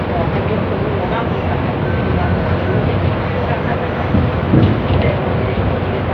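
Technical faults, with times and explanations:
No technical faults are present, so there are no times or explanations to give.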